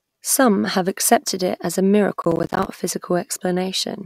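From 2.22 to 2.67 s, the processor falls behind and misses a run of its audio buffer deadlines, producing processor overload crackle. Each missed block comes out as a short hole of silence with abrupt edges. The gaps are spaced closely enough to suggest buffers of around 10 ms, with something like twenty of them dropped. Over this stretch of speech they merge into a dense, gritty tearing that sits on top of the sound and stops once the load eases.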